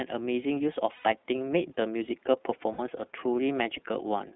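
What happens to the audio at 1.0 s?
Packets of the iLBC codec stream went missing from 0.95 to 1.06 s, about 90 ms, which fits three lost 30 ms frames; the decoder filled the gap by repeating the last pitch cycle blended with noise, so the sound turns into a held, slightly buzzy vowel before the voice returns right after. Throughout, the narrowband iLBC coding, likely at its 13.33 kbps mode, limits the band to roughly 200 Hz to 3.7 kHz and gives the speech a plainly rough, synthetic edge.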